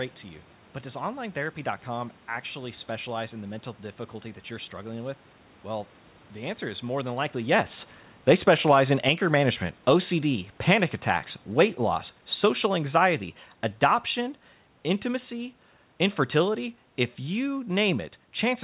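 From 7.93 to 9.05 s, automatic gain falling lowers the level by about 3 dB. The gain control judged the input too loud, or its background noise too strong, and turned it down gradually. The speech and its room noise sink together. It recurs from 11.52 to 15.42 s, falling about 4 dB.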